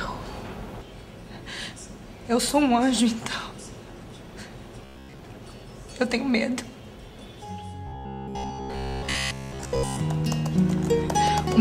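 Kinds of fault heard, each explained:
Robotic sound from repeated short buffers: Twice the sound hardens into a rigid, metallic buzz, briefly from 4.85 to 5.19 s and for about two seconds from 7.87 to 10.0 s. The buzz sits at 66.8 Hz, so each repeated slice lasts about 15 ms. The likely cause is new audio arriving too seldom, with the last short buffer replayed to fill the gap. Most of the real audio there is skipped, though the buzz still roughly follows it.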